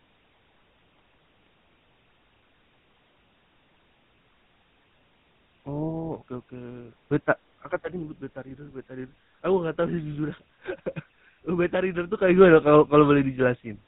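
Throughout, the speech has passed through the GSM full-rate codec, at a rate consistent with about 13 kbps, which rebuilds the voice from a vocal-tract model and coarse pulse excitation and drops everything above 4 kHz. The result is a plainly audible buzzy, gravelly roughness with a muffled top end.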